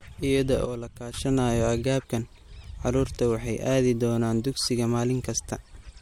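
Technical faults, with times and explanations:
0.65 to 1.14 s, sudden gain jump: the speech and the background noise both drop by about 10 dB in a single step, hold there for roughly half a second, then snap straight back up. Because the change lands between one sample and the next with no fade, the level steps rather than dips smoothly. That points to a gain setting or bit shift being applied and then removed without a ramp, which is the likely cause here.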